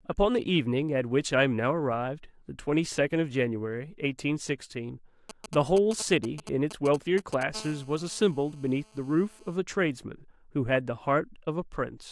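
GSM signalling bursts run from 5.30 to 7.43 s: a galloping dit-dit-dit of ticks and brief buzzes breaks into the speech, fairly loud, around 10 dB below it. A nearby 2G phone is exchanging short control transmissions with the network rather than carrying a call, and the audio circuitry rectifies those radio pulses. The bursts within each group repeat at 217 Hz, so every tick carries a short raspy tone at that rate, arriving in uneven clusters.

GSM phone buzz follows from 7.55 to 9.56 s, once the phone settles into a call. It now transmits continuously in its time slot, 217 times a second, and the rectified pulses become a steady, hard buzz at 217 Hz, dense with harmonics that give it a rasping edge. It sits about 25 dB below the speech, quieter than the signalling bursts, and has no relation to the pitch or rhythm of the speech.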